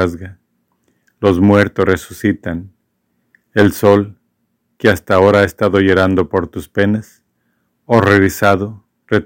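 The speech is hard clipped in six places: 1.25 to 2.26 s, 3.58 to 3.97 s, 4.85 to 6.39 s, 6.80 to 6.83 s, 7.93 to 8.54 s and 9.13 to 9.17 s. The level is driven past what the signal path can carry, by about 3 to 9 dB. Peaks are sliced flat. This adds high harmonics. The longer runs sound like harsh fuzz. The short ones at 6.80 and 9.13 s are brief crackles.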